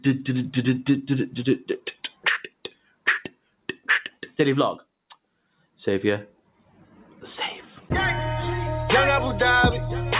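Across the whole clip the sound pumps and thins, with its level wavering by around 5 dB as sustained parts sink and sharper onsets hold up. This is a noise suppressor applied to music or sounds. A processor designed for speech treats steady tones, room ambience and reverberant tails as noise and pulls them down. The overall band stops at 4 kHz, which fits a call path running G.711 mu-law at 64 kbps.

The worst moments are where the sound is cut by the noise suppressor. These are audible dips from 1.94 to 2.25 s (about 16 dB deep), 2.49 to 3.06 s (about 19 dB), 3.3 to 3.88 s (about 18 dB), 4.11 to 4.39 s (about 14 dB), 5.45 to 5.79 s (about 16 dB) and 6.3 to 7.21 s (about 15 dB). In each, held or decaying material sinks or its tail is cut short. The longest stretch lasts around a second.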